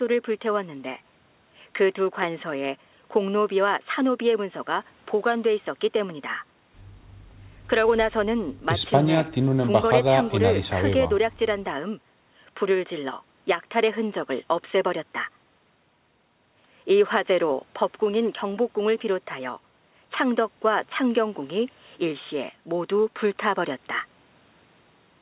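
A speech recording with no technical faults. It carries the narrow, telephone-like sound of a working call path, with nothing above 4 kHz, which fits G.711 mu-law coding.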